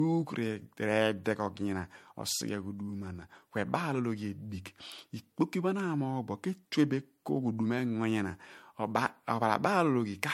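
Right through the speech there's a swirly, hollow smear, attacks go soft, and nothing sits above 16.6 kHz. That's likely generation loss: MP3 re-encoded about four times at rates near 67 to 69 kbit/s, each pass adding fresh quantisation damage.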